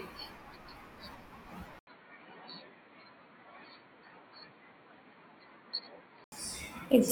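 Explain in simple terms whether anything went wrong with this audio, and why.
At about 1.79 s the sound briefly drops out (roughly 80 ms), then comes back quieter, duller and with a faint new background hiss, losing everything above 4.4 kHz. That's likely an input switched to a poorer device, and it switches back at 6.32 s.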